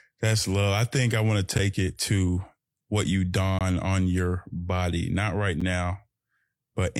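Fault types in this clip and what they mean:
gap between stream segments: Short, hard-edged holes of silence interrupt the speech at 1.58 s, 3.59 to 3.61 s and 5.60 s. They fall about every 2 seconds and last roughly 8, 21 and 10 ms. Each sits where one 2-second segment meets the next. Their time stamps leave a small gap, and the player fills it with silence, so the speech is briefly paused rather than cut.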